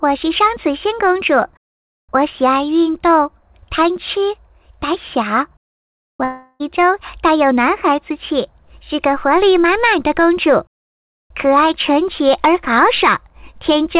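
At 6.24 s the audio stops being real and turns into a smeared, buzzy continuation of the last sound, fading for roughly 0.36 s until things pick up again at 6.63 s. That's most likely a long network dropout: packets stopped arriving, and the receiver filled the whole gap by stretching what it last had rather than going silent. The roughly 360 ms that was lost never comes back. The band-limited, telephone-like tone with nothing above 4 kHz fits the G.711 call path.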